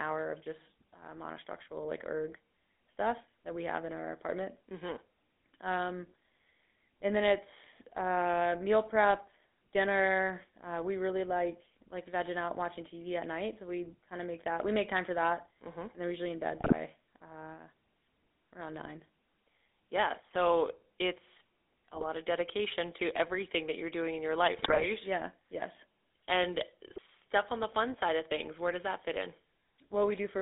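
GSM full-rate codec, present from start to finish: the speech passes through the first-generation GSM coder, which models the vocal tract and drives it with a sparse, regularly spaced pulse excitation. That coarse excitation gives the voice a plainly audible buzzy, gravelly roughness. The band runs only from about 250 Hz to 3.6 kHz, so low warmth and all upper sibilance are gone. The sound fits a 13 kbps full-rate stream.

GSM bit errors, at 16.60 to 16.73 s (just after "they're usually in bed"), 21.94 to 22.06 s (just before "of dedication to everything"), 24.58 to 24.87 s, and 26.90 to 27.00 s (just before "on the fun side"): corrupted bits reach the decoder and scramble the filter, pitch and gain values for a few frames. The voice briefly squawks, pops and gargles. The event at 24.58 s lasts longest, and the damage points to roughly 2 to 3.5 percent of bits flipped.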